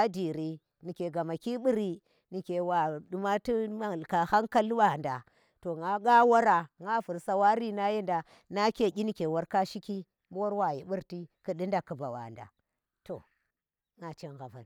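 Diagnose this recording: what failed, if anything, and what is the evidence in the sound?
Nothing failed, and the sound of this speech recording shows no evidence of a fault at any stage of the chain.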